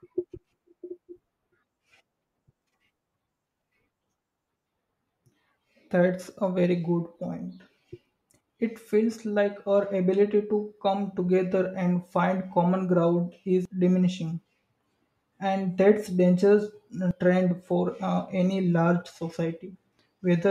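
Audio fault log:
8.41 s, 13.65 s, 17.11 s: dropped buffer (overrun). Each has the speech jumping forward, skipping about 40 ms at 8.41 and 17.11 s and about 150 ms at 13.65 s, likely from samples overwritten before being read. Unlike an underrun, no silent gap is heard.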